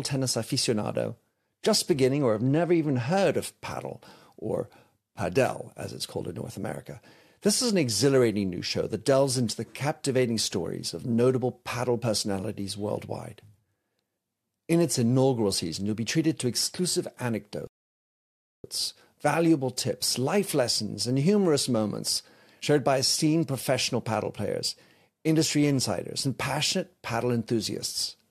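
At 17.67 s the speech drops into silence for nearly a second, then picks up at 18.64 s exactly where it left off. That's a rebuffering stall: the player ran dry of downloaded audio and waited for more. Nothing gets skipped, it just adds about 0.97 s of dead air.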